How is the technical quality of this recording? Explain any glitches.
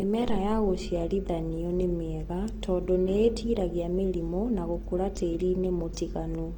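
The recording is clearly degraded by lossy compression across its whole length. Throughout, the speech sounds grainy and rough, likely from Opus compression in its music (CELT) mode, at a rate fitting about 24 kbps. With too few bits, the encoder keeps each band's energy but fills the detail with folded or noise-like content, so tones turn coarse. Unlike MP3, there is little swirling, and the band stays full, reaching up to 20.2 kHz.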